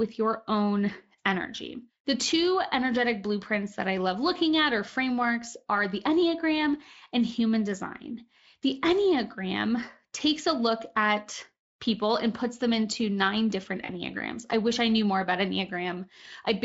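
VoIP packet loss concealed by the speech codec occurs at 13.85 to 13.91 s, just after "them into nine different". About 40 ms of audio went missing, which fits two lost 20 ms Speex frames. The decoder filled the gap by extending the last pitch and spectral shape at falling gain, leaving a brief buzzy or noisy, smeared stretch that fades before the signal recovers.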